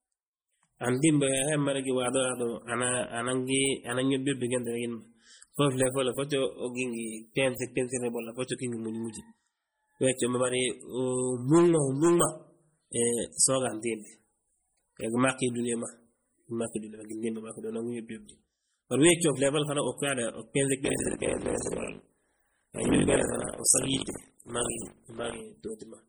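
From the start, the whole clip has a watery, swirling quality, with a metallic chirp on the s sounds and smeared consonant onsets. The damage is heavy, and that's likely MP3 compression at a low bitrate, somewhere around 32 kbps. Starved of bits, the encoder drops the weaker frequency lines, and they flicker in and out from frame to frame. That flicker is the swirl you hear. The top end does carry on up to about 21.1 kHz.

Then, from 20.84 to 25.42 s, you get buffer tearing: a robotic 50 Hz buzz riding on the speech, and it's only there while sound is playing. The writing side and the hardware reading side of the ring buffer have drifted, so in each 20 ms period roughly a third of the buffer replays audio from about 70 ms earlier, with hard joins at both edges.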